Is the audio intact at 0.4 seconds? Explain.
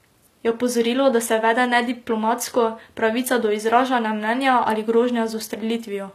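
No. At 0.4 s, as throughout, the speech shows low-bitrate audio saved at a high bitrate. Nothing is present above 14.9 kHz, and the first encoding's coarse artefacts remain, likely from a low-bitrate source re-saved as MP3. A spectrogram shows a hard, flat ceiling at 14.9 kHz.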